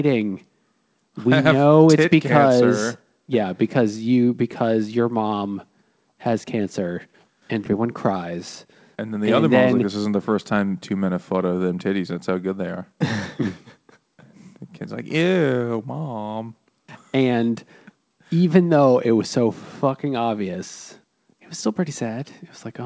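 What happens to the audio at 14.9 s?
Nothing goes wrong at 14.9 s: the speech continues intact, with only the ordinary narrowing of the call path, which leaves nothing above 8 kHz.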